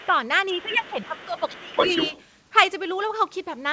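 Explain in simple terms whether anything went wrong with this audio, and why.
A couple of things went wrong, both from the call's echo handling. Right at the start, 0 to 0.06 s, and again from 0.58 to 2.23 s, there's the other side's voice leaking through. It's a faint trace at first, but later it's nearly as loud as the main talker. The likely cause is the talker's loudspeaker being picked up by their mic without the echo canceller fully removing it.

Around the same time, the talker got squashed too: speech suppressed in double talk, with a short, mild dip from 0.07 to 0.14 s and a longer, deeper one from 0.51 to 2.13 s, covering about a second in all. Both sides were probably talking at once, and the canceller likely turned everything down because it couldn't tell them apart.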